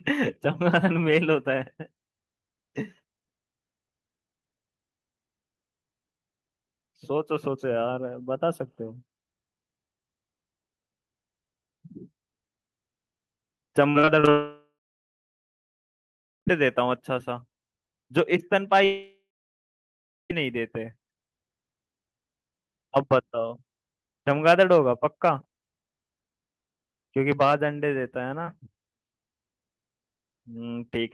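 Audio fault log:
13.89–14.29 s, repeated packet loss (robotic sound): the speech turns choppy across this 0.4 s stretch, broken by five short holes, the longest 55 ms. Each hole is bridged by extending the preceding sound, so about 39% of the span is synthetic fill rather than real signal. The fills arrive in quick succession, which gives the mechanical texture and leaves small pieces of speech missing.
14.31–16.49 s and 18.85–20.32 s, long network dropout: the speech stops. A brief fading continuation of the last sound is followed by silence, lasting about 1.74 s in the first gap and about 1.07 s in the second. The speech then resumes further along, with roughly 2.16 s and 1.46 s of material absent. This pattern likely comes from the stream stalling entirely, with the receiver concealing briefly before giving up.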